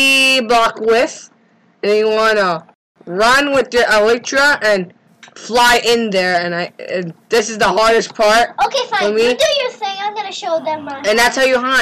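Bluetooth stall, 2.74 to 2.96 s: the audio drops to silence for about 215 ms, then resumes. The likely cause is radio interference delaying packets, so the headphones' buffer emptied and playback halted until the retransmitted data reached it.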